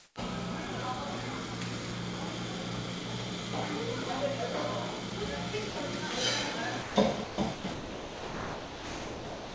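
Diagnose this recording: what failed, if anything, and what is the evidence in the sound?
The first 0.16 s is call processing, likely discontinuous transmission. The real background, sitting about 36 dB below the loud parts, is swapped for smooth, featureless comfort noise about 10 dB off in level. It's a smoother noise with none of the room's texture.

The sound dropped by the voice detector is also a call-processing fault. The sender's detector likely mistook quiet sound for background. The sound drops out to steady noise at 5.10, 5.70–5.76, 6.82–6.96, 7.24–7.38 and 7.54–7.64 s, then from 7.74 s to the end. Everything is band-limited to 8 kHz by the G.722 link.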